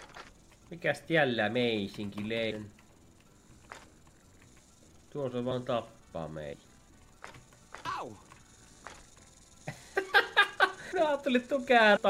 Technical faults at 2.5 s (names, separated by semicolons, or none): compressed frames skipped